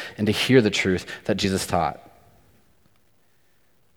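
At 1.43 s, just after "hear the truth that", the speech jumps forward. This is a case of compressed frames skipped. One frame of the encoded audio never reached playback, either lost from the file or discarded by the decoder as damaged. About 20 ms of speech is simply gone. It comes across as a tiny hiccup in the flow of the speech.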